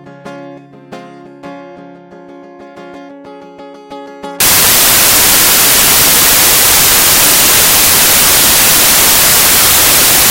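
From 4.40 s to the end, samples built from the wrong bytes turn the music into loud, harsh broadband noise.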